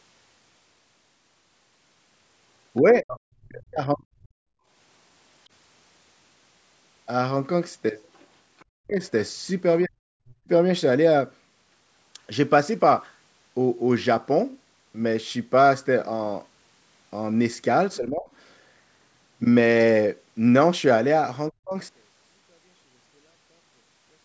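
From 2.8 to 4.33 s the speech sinks by roughly 40 dB, most likely speech suppressed in double talk: the echo canceller, hearing both sides at once, turned everything down. On a waveform the envelope shrinks. At 4.61 to 4.67 s the background is gated by the echo canceller, dipping about 14 dB for a brief moment while the loudspeaker played. This shows as a short notch in the noise floor that fills back in.

At 8.15 to 8.27 s and 8.59 to 8.65 s the other side's voice leaks through. These are faint scraps, roughly 35 to 40 dB below the talker, and likely remnants of loudspeaker echo the canceller failed to remove. They appear as isolated smudges of harmonics on the spectrogram.

What is likely the same double-talk suppression returns at 8.71 to 9.0 s, 9.85 to 10.49 s, 17.97 to 18.29 s (a shallower dip of around 20 dB) and 21.5 to 21.77 s. Each time the speech briefly drops out or turns dull.

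From 21.89 s to the end, one channel is inverted, likely a polarity flip. Summed to mono, the centred speech cancels and falls about 38 dB, leaving only a faint residue. The waveform shrinks to a sliver, and the spectrogram goes pale, with nothing above the call path's 8 kHz ceiling.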